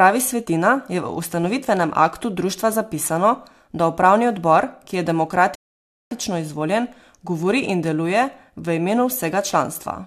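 A rebuffering stall interrupts this speech clip from 5.55 to 6.11 s: the player exhausted its downloaded audio, fell silent for about 0.56 s while waiting for more data, then picked up exactly where it stopped, so nothing is lost but time is added.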